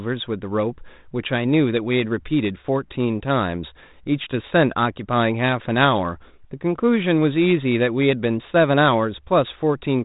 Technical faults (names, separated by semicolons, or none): none